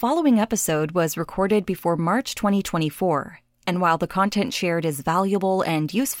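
No technical faults can be heard anywhere here.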